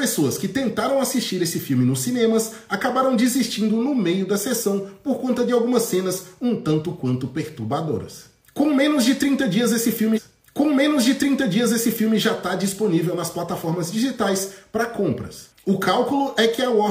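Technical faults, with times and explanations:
10.13–12.12 s, stream segment repeated: about 2.0 s of the programme plays a second time, because the player queued the same stretch twice. Unlike a short buffer stutter, the whole passage returns intact at normal speed, lengthening the clip rather than freezing it.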